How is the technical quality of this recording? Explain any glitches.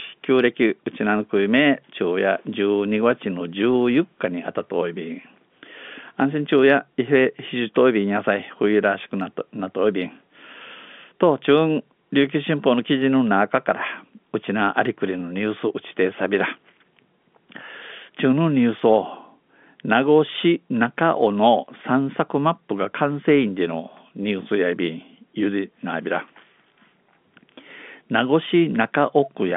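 No glitches or technical faults can be heard in this recording. The speech has the narrow band of G.711 telephone coding, roughly 200 Hz to 3.5 kHz, with at most a faint quantisation noise that rises and falls with the level of the signal.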